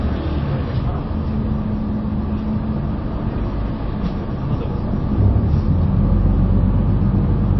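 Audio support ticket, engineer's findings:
Watery, swirly texture throughout; treble gone above 5.8 kHz. Likely MP3 compression at a low bitrate, near 23 kbps. Flickering zeroed bands, not steady filtering, distinguish it from plain low-pass.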